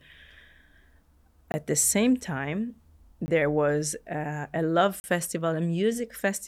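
At 1.52 to 1.54 s, 3.26 to 3.28 s and 5.00 to 5.04 s, the speech drops into a block of digital silence. Samples became zeros, suggesting a late-filled output buffer. The 20 ms gaps and the 40 ms gap are heard as brief holes.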